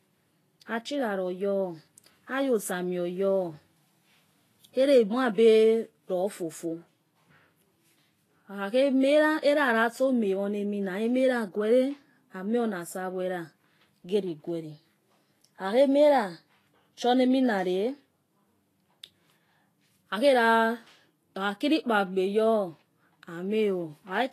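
Throughout, grainy, hissy treble ending at 14.2 kHz points to likely Vorbis compression near 32 kbps. Unlike plain filtering, fine detail turns to noise instead of dulling.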